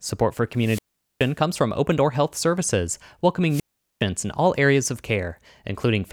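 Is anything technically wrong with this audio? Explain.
Yes. There are two wireless microphone squelch dropouts in this speech. From 0.56 to 1.34 s, just before "comes from", and from 3.49 to 4.03 s, before "in all areas of", hiss swells, then the output mutes for about 0.42 s and 0.41 s. The radio signal fades until the receiver's squelch shuts the audio off. The rising static before each hole is what sets this apart from a digital dropout, which cuts off cleanly with no noise.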